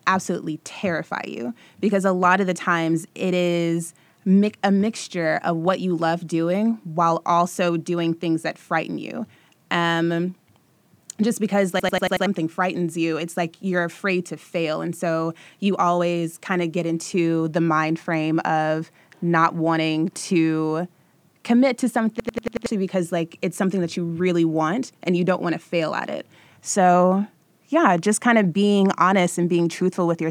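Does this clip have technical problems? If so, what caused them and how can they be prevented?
Yes. A system hang loop occurs at 11.80 to 12.26 s and again at 22.20 to 22.66 s in this speech. Each time, one 93 ms slice repeats five times, a stutter at 10.8 Hz. That fits a 4096-sample buffer replayed while the system froze. About half a second of speech is lost each time. Preventing it means keeping audio threads at high priority and fixing drivers that stall.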